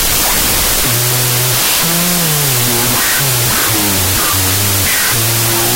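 From start to finish the speech is buried under loud, hissing noise, and what survives of it plays at half speed, an octave low. This is a wrong sample width fault: 32-bit float data read as 16-bit integers, so each float splits into two samples. The low halves are scrambled mantissa bits, producing the noise; the high halves keep a coarse trace of the signal. A waveform looks dense; a spectrogram shows a bright broadband floor with faint, downshifted harmonics.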